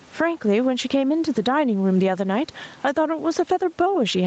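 Gain pumping runs through the whole clip: the level ducks by about 10 dB under louder speech. The likely cause is input gain set far too high, with a fast limiter clamping each peak, leaving everything squashed.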